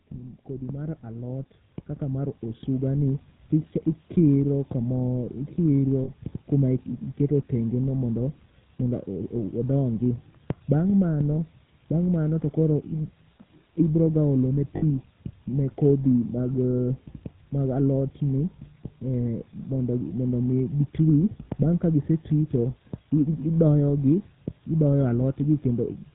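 The whole clip runs through the GSM full-rate codec, and the damage is plainly audible. The coder models the vocal tract and feeds it a sparse pulse train, keeping only a third of the excitation samples, so the speech comes out buzzy and gravelly with nothing above 4 kHz. That thin, rasping character fits the old 13 kbps full-rate coder.

There are two spots with lost GSM frames. At 6.04 s, about 40 ms goes missing, which fits two dropped 20 ms frames. The decoder reuses the last good frame's settings, so the sound hangs on as a short metallic ring. At 14.76 s, just after "ibroga olone", a longer gap of about 60 ms, which fits three frames, gives the same rough held ring, stretched a little further.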